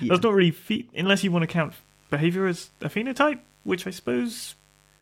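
From 1.08 s to the end of the clip, a mains buzz sits under the speech: sharp switching spikes riding the 50 Hz supply leak in, giving a steady raspy buzz well below the speech. A spectrogram shows evenly spaced harmonic lines of 50 Hz climbing to several kHz.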